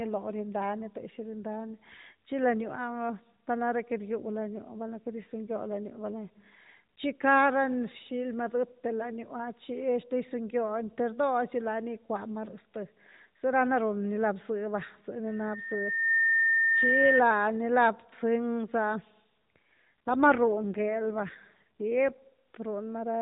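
From 19.76 s to 22.29 s the speech turns buzzier and more synthetic. This is an AMR rate drop. On a weak link the codec traded speech bits for error protection, which fits a fall from 12.2 to 5.9 kbps. There is no gap.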